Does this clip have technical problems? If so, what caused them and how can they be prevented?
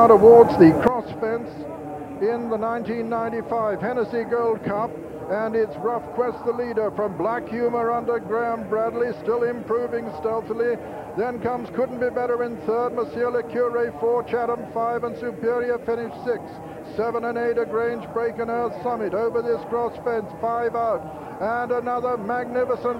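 Yes. At 0.88 s the level drops abruptly by about 12 dB and stays down to the end, with the background noise falling together with the sound. This sudden gain jump is likely a digital gain change applied between adjacent samples without any ramp. Preventing it means smoothing every gain change over several milliseconds instead of switching instantly.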